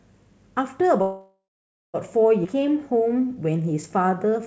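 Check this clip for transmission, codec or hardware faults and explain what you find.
Three transmission faults affect this speech clip, which came through a wideband call codec with nothing above 8 kHz, consistent with G.722.

From 1.02 to 1.96 s there is a call audio freeze: the last sound trails into a fading buzz or hiss, then roughly half a second of silence. The likely cause is delayed packets draining the jitter buffer.

At about 2.44 to 2.47 s the audio skips ahead with almost no gap, jumping past around half a second of speech after a dropped stretch of packets.

From 2.55 to 4.44 s a jitter buffer slow-down plays the speech at about 89% speed at unchanged pitch. Repeated pitch periods add about 0.21 s to rebuild the buffer.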